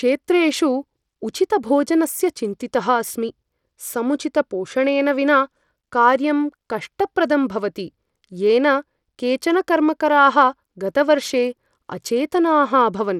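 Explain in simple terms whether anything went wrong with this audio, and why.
Something did go wrong, and it lasts from the first second to the last. The speech sounds like it went through Bluetooth SBC compression, the basic codec many wireless headphones use. That is likely the cause. This codec splits sound into a few wide bands and gives the quietest high bands little or nothing. So the crisp top end is gone, with nothing above 17.6 kHz. The treble flickers, and a gritty, rough noise clings to the speech.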